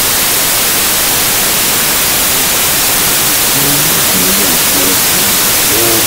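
From start to finish the audio shows a wrong sample width: 32-bit integer data read as 16-bit, so each sample splits into two values. Loud broadband noise swamps a faint trace of the original, which plays at half speed and an octave lower.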